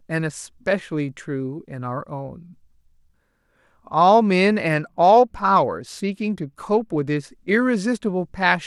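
A Bluetooth SBC bit pool drop runs from 4.67 to 7.17 s of this speech. For about two and a half seconds the encoder spends far fewer bits on each frame, which fits a fall in bit pool from 28 to 12, near 96 kbps. The highest sub-bands get little or nothing, so the treble goes dull, while the remaining bands are coarsely quantised and a gritty noise rides on the speech. Both clear once the rate recovers at 7.17 s.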